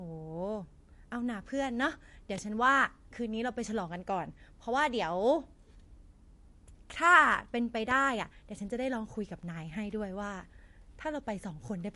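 From start to finish the speech sounds watery and swirly, with the top end gone: nothing is present above about 11.3 kHz, so s sounds lack their usual air and bite. The likely cause is MP3 compression at a low bitrate, consistent with roughly 48 kbps. Short of bits, the encoder cuts off the treble at a fixed frequency and drops weaker spectral detail, which flickers in and out between frames and makes the codec damage plainly audible.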